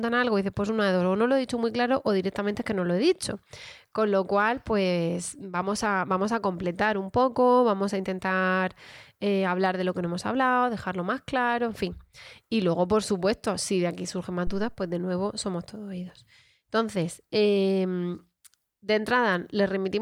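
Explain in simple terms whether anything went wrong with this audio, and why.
Something did go wrong: a phantom power thump at 14.47 s, right after "de aquí surgen más". Someone switched the mic's power on a live input, and that sudden jolt came through as a deep thud fading in about 80 ms, before "de nuevo somos todos".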